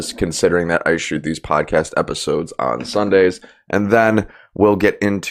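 Nothing stood out on listening to this speech recording.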